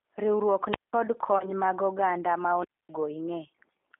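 Throughout, the speech has passed through a G.729 codec, which rebuilds each short frame from a vocal tract filter, a pitch predictor and a few pulses at what fits 8 kbit/s. The band runs only from 250 Hz to 3.5 kHz, and the voice sounds plainly rough and synthetic.

From 1.38 to 1.49 s, there is VoIP packet loss concealed by the speech codec. About 20 ms of audio went missing, which points to a single lost packet. The decoder filled the gap by extending its last pitch and filter settings at falling gain, and the voice stays weak or distorted while it recovers over the following frames.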